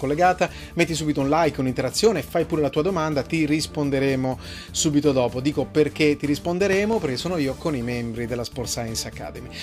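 A loud pop, actually two pops in quick succession, strikes the audio between 6.73 and 6.95 s, peaking roughly 10 dB above the surrounding sound, which continues underneath. It is likely caused by a sudden voltage step or pulse entering the signal chain, such as from a plug, switch, static discharge or driver glitch.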